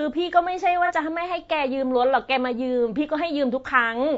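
A speech clip with two technical faults. Throughout, the voice sounds rough and grainy. Noise fills the gaps between the harmonics, and the top band sounds thin and synthetic. The likely cause is low-delay AAC compression, the AAC-ELD type used in video calls. Its short frames resolve pitch harmonics poorly and use up bits. The damage here is plainly audible, which fits a low bitrate around 32 kbps. From 0.86 to 0.92 s there is a brief smeared, noisy patch. This is AAC frame loss with concealment. A block of audio went missing, and the decoder filled the gap by reusing the last good spectrum with scrambled detail. The missing stretch is about 30 ms, which points to a single lost frame. The gap is too short to fade into silence, so it comes across as a quick blur in the sound.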